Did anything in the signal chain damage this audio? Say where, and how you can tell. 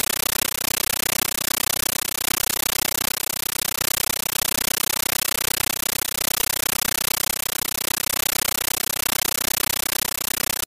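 Yes. At the playback stage, a compressed stream was played as audio: an AC-3 bitstream was passed to the output as plain PCM samples and never decoded. From start to end the clip is loud, chattering static. It comes as bursts of noise about 13.3 ms long, repeating 31.25 times a second, each followed by silence. That burst-and-gap rhythm, locked to the frame rate, separates it from broadband hiss or clipping. Each frame is a dense data payload and then zero padding, which fits a 640 kbps stream.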